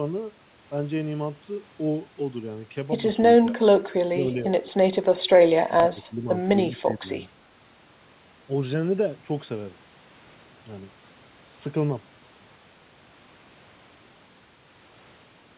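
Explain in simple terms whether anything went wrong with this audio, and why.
The voice briefly dips or partly cuts out at 3.39–3.6, 3.89–4.16, 5.67–6.29 and 6.78–7.21 seconds. This is likely speech suppressed in double talk: the echo canceller turned everything down while both sides talked at once. The narrow, phone-like sound with nothing above 4 kHz simply comes from the call codec.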